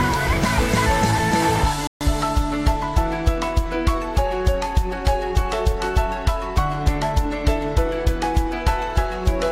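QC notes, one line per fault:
1.87–2.01 s, playback stall: the sound just drops out mid-flow for about 136 ms, a clean hole of dead silence, then carries on. It's long enough to catch as a hiccup rather than a click, and there's no smearing or fade at either edge, just an abrupt stop and restart. Most likely the player ran dry on data or its audio thread got held up briefly, so nothing reached the output until it caught up.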